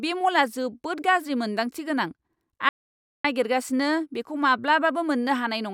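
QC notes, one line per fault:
2.69–3.24 s, audio dropout to silence: the speech stops abruptly mid-flow and the signal falls to silence for about 0.55 s, with no room tone or background left underneath, then the speech returns just as abruptly at 3.24 s. Whatever was said in that half-second is simply missing. A gap this dead points to the input being lost while the recorder kept writing silence, likely a momentary disconnect, a failed link or a stray mute.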